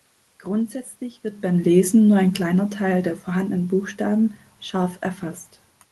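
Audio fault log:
1.7–4.38 s, automatic gain falling: just after "wird beim" the level starts loud, then slides down by about 4 dB over roughly 2.7 s, with the room noise sinking alongside, because the gain control judged the input too loud or its background noise too strong and gradually reduced its gain.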